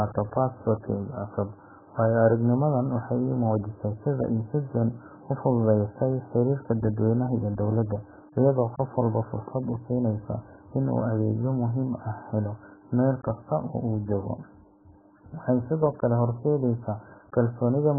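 AAC compression runs from start to finish: the speech is dull and smeared, with nothing above 1.7 kHz and a warbling, fizzy texture on sustained sounds, which points to heavy damage from likely AAC-LC coding at a very low bitrate around 8 kbps, starving the frequency lines and lowering the cut-off.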